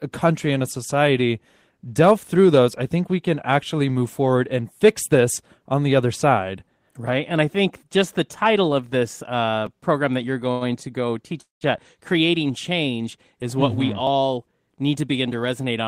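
Speech recording with four kinds of playback-timing fault between 9.67 and 15.08 s. Twice the output device ran short of fresh audio and played its last buffer again, giving a repeated buffer at 9.67 s and again at 14.07 s. Each time a 5 ms slice sounds one extra time with a hard join on either side. At this size the repeat is too short to register as a stutter and comes across as a click or brief buzz in the speech, with essentially nothing lost. From 10.51 to 10.64 s a packet arrived late and the jitter buffer emptied, producing a short stall from a late packet. The receiver bridged the wait by extending the last sound for 96 ms and then picked up from the same point. The ear hears a syllable held unnaturally long, with a faint buzzy or dipping quality, and no speech is skipped. A longer interruption from 11.41 to 11.64 s is a call audio freeze, most likely caused by packets held up in transit until the jitter buffer ran dry. 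The receiver spun out the last sound for a moment and then let it fall away, so about 140 ms of the roughly 200 ms gap is silence. The speech then resumes exactly where it stopped, so a pause has been inserted rather than anything removed. Finally, from 14.38 to 15.08 s, a jitter buffer speed-up happens. Having accumulated more audio than its target after the earlier delays, the receiver trimmed many tiny pitch-period-length pieces in succession, around 70 ms in total. The speech runs at about 110% of normal rate with its pitch unchanged, so that stretch sounds noticeably hurried.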